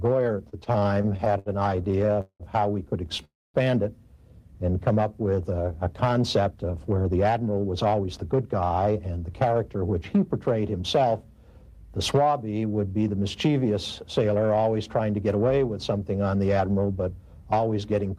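From 0.49 to 2.43 s, repeated stalls (stutter): the jitter buffer ran dry 20 times, longest gap 188 ms, stretching sound so it drags and hitches.

At 3.25 to 3.57 s, a call audio freeze: about 0.3 s of held sound fading mostly to silence, likely from packets delayed in transit.

Jitter buffer speed-up at 6.40 to 9.21 s (113%, roughly 0.4 s trimmed) and 17.58 to 18.17 s (110%) hurries the audio at unchanged pitch.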